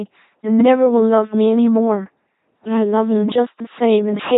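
A speech clip run through an LPC-10 vocoder from start to finish, so it comes out as a heavily damaged, buzzy robot voice, with nothing above 3.8 kHz. Each moment gets rebuilt from a pulse train or noise through a short filter, which fits a 2.4 kbit/s stream.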